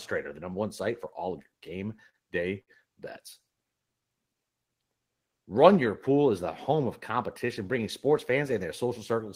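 From 1.51 to 2.16 s the speech shows repeated stalls (stutter). Packets kept arriving behind schedule, so the jitter buffer emptied five times and the receiver extended the last sound to cover each wait. That filler totals 78 ms, about 12% of the span, and the longest hold is 39 ms. Nothing is dropped, which separates this from packet loss. The audio drags and hiccups rather than skipping.

At 2.61 to 2.70 s there is a single short stall from a late packet. One packet missed its slot, and a sound is held for 63 ms until it arrived. Playback then resumes exactly where it stopped, 63 ms later than before. Unlike the stutter, it is one isolated hold with a slight buzz or dip.

From 5.24 to 5.51 s a jitter buffer speed-up trims surplus buffered audio. The receiver snips out pitch-period-sized pieces in quick succession, removing around 40 ms in total, so the speech runs at 111% speed and sounds hurried. 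The pitch stays the same, which distinguishes this from a resampling or clock-rate error.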